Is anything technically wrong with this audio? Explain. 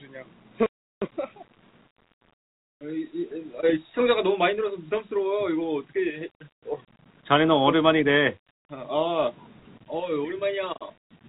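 No, nothing here is actually wrong: the sound stops at about 4 kHz, which fits an ordinary narrowband call path like G.711 mu-law, and that's just how such a line carries audio.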